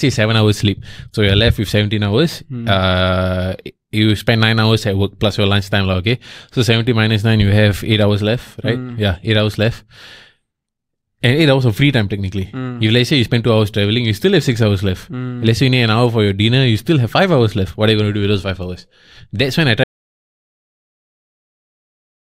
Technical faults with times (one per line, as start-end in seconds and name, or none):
19.84-22.27 audio dropout to silence